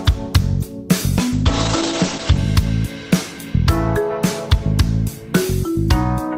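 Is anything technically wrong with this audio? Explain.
Yes, there's one problem: a call bitrate drop from 1.32 to 2.45 s. The call's bandwidth estimate fell, so the encoder got squeezed onto far fewer bits and had to code everything more coarsely. You hear it go rough and muffled as the top end vanishes, with the cut-off falling from 20 kHz to 8 kHz, which fits a drop from around 40 kbps to roughly 9 kbps. It sits at its worst for about a second, then clears once the bitrate recovers.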